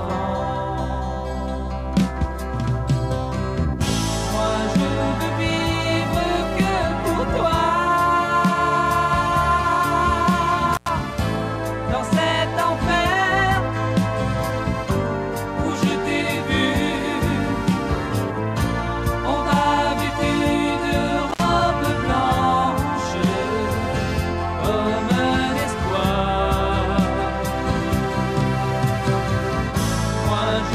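At 10.73 s the sound drops out with a short burst of crackle. This is an intermittent contact: a loose cable or plug briefly loses connection, and the signal path opens. The gap lasts about 92 ms, with faint hiss underneath and crackle at each edge as the contact breaks and remakes. It happens again at 21.30 s. That gap is shorter, about 61 ms, with the same crackling edges.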